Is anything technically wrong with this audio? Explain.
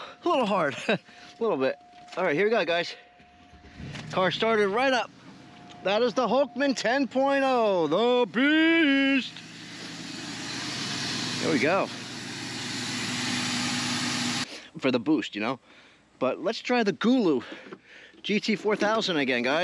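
No, nothing technically wrong turns up here; the audio sounds just as it should the whole way.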